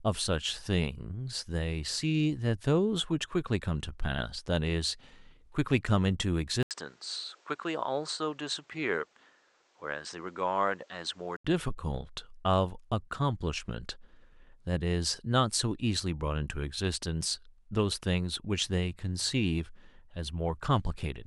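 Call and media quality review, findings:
Speech goes dull and boxy 6.63–11.45 s. Nothing above 8.8 kHz, level drops about 5 dB, and there's fresh noise roughly 35 dB under the talker. 80 ms gap at 6.63 s. Likely input switched to a poorer device mid-call, then back.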